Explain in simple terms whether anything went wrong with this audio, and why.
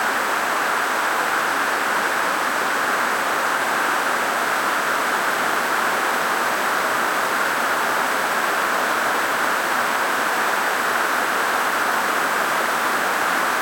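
Something did go wrong. A steady, high-pitched USB whine at 8 kHz runs through the whole recording. The USB connection pulls power in tiny bursts 8,000 times a second, and that rhythm leaked into the audio path as a constant tone sitting under everything.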